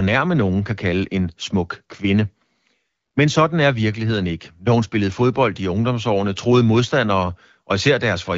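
No technical faults turn up anywhere in the speech, which carries the characteristic band limit of an AMR wideband (HD Voice) link with only light coding texture, consistent with a rate around 12.65 kbit/s.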